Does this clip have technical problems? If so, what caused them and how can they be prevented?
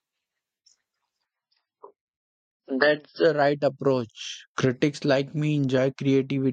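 Yes. From 1.25 to 3.25 s, an adaptive stream at a lower bitrate took over as the connection slowed. With no gap, the speech abruptly loses everything above 5.6 kHz and turns grainy, pointing to roughly 15 kbit/s MP3. To prevent it, use a larger playback buffer or set a higher minimum rendition so the player never falls back to such a low bitrate.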